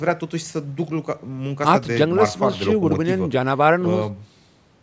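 No technical faults can be heard in this speech.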